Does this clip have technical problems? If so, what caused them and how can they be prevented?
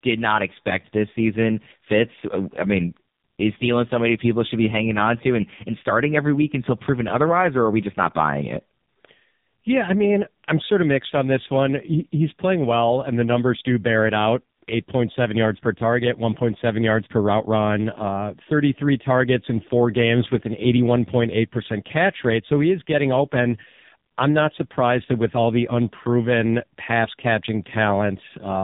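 Yes. Throughout the speech, an AMR narrowband mobile codec was run at a very low mode, with the heavy damage pointing to roughly 5 kbps. Its vocal-tract model, fed too few pulses per frame, makes the voice buzzy and synthetic, and nothing above 3.8 kHz survives. To prevent this, record or route the call over a wideband path, or at least a higher AMR mode.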